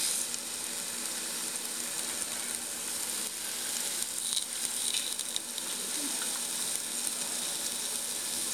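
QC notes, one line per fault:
No faults heard on this audio.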